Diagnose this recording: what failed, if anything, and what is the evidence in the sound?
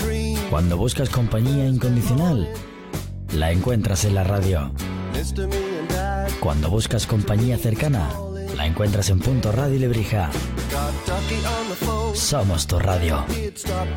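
Nothing failed at any stage, since no dropout, click, distortion, level jump or other defect can be heard anywhere in the recording.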